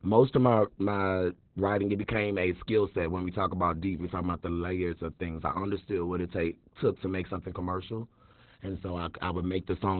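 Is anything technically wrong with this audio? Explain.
Yes. Opus voice compression runs throughout: the speech-mode coder has narrowed the band to nothing above 4.1 kHz and coded the excitation coarsely, which fits about 8 kbps, leaving the speech muffled, hoarse and slightly robotic.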